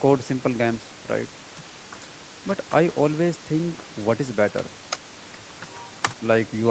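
A speech recording with no technical faults: the room noise sits about 17 dB below the voice, and content stops at 8 kHz, which fits a wideband call path, consistent with Opus at a modest bitrate.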